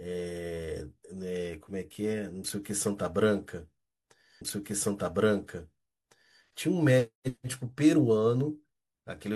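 At 4.37 s the player fetched or queued the same stream segment twice, a stream segment repeated fault. Until 6.38 s about 2.0 s of the speech plays again, so a stretch already heard returns, with a small blip at the jump back.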